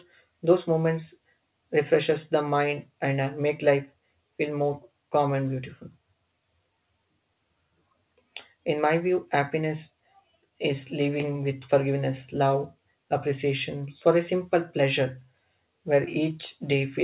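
Nothing is technically wrong with this speech clip; it has the narrowband sound of a call path, with nothing above 4 kHz, which fits a G.711 mu-law codec at 64 kbps.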